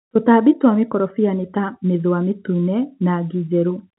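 No technical faults can be heard in this speech clip, which carries the narrow telephone band of G.711 coding with nothing above about 3.9 kHz.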